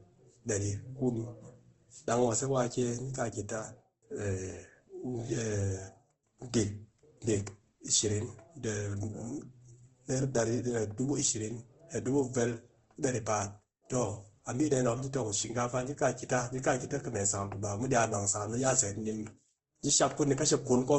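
A speech clip that has likely been through Opus compression at a low bitrate, which fits a rate near 16 kbps in its music mode. Throughout, nothing reaches above about 8.2 kHz, and the sound is plainly grainy and rough where the encoder fills starved bands with noise.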